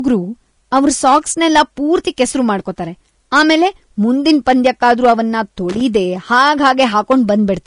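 Throughout the speech, nothing sounds above 10.6 kHz and the treble is plainly grainy and hissy, likely Vorbis compression at a low bitrate, around 35 kbps. Hard clipping flattens the loud peaks, overdriven by about 4 to 6 dB, adding crackly harmonics at 0.76–1.18, 1.56–2.23, 3.35–3.67, 4.28–5.13 and 6.32–7.31 s. From 5.70 to 5.81 s, loose connector crackle appears as an irregular scratchy burst where an intermittent contact chops the signal.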